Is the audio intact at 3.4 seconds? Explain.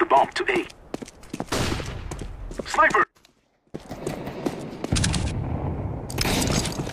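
No. From 3.03 to 3.74 s the audio dropout to a faint residue removes the signal for about 710 ms, leaving only a faint leak about 30 dB down, likely from a break upstream while the path stayed live. The waveform collapses abruptly to a thin sliver, and the spectrogram goes nearly dark.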